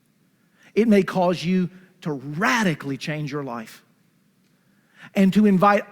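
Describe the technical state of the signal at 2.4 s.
At 2.4 s the signal is intact, with no dropout, distortion, glitch or other technical fault audible at that point.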